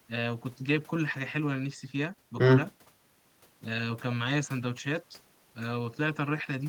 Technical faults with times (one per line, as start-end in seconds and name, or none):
none